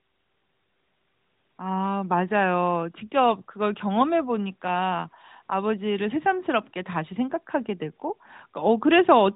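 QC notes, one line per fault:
No faults to note.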